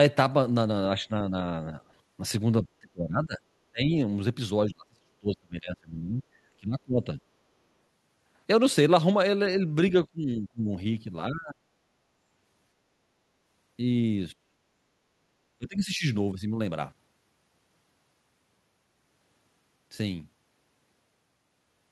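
An echo canceller that likely could not separate the near talker from loudspeaker echo during double talk pulls this speech down at 0.96–1.8, 2.62–3.95, 4.66–7.2, 10.05–10.7, 11.29–11.64, 14.32–14.45 and 15.59–16.07 s. This is speech suppressed in double talk: the voice sinks by up to roughly 35 dB, barely at first. At 14.73–14.81 s the canceller also clamps the microphone, so the background gated by the echo canceller drops about 10 dB and then returns.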